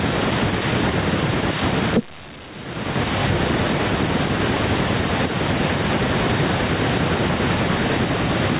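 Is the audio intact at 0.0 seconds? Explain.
No, gain pumping runs through the whole clip, so it's already there at 0.0 s. The input gain is likely set far too high, with a fast limiter clamping each loud burst, so the gain swings by around 25 dB.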